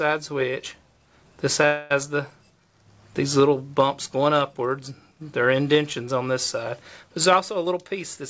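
From 1.66 to 1.92 s the sound stops moving forward and the last moment is held and stretched into a fading buzz for about a quarter of a second, then the audio picks up exactly where it left off with nothing skipped. This is a call audio freeze, and the likely cause is packets held up in transit until the jitter buffer ran dry. The receiver filled the roughly 244 ms wait by extending the final sound, so everything after it now arrives that much later.

From 7.64 to 8.24 s the audio runs noticeably quicker, at about 109 % of normal speed, while the pitch stays the same, giving that stretch a slightly rushed, pressed-together feel. This is a jitter buffer speed-up. With more audio queued than it wants, the receiver trimmed many tiny slices, each only a pitch period or a few long, adding up to roughly 50 ms. Throughout the clip, including across both faults, the call path's band limit leaves no content above 8 kHz.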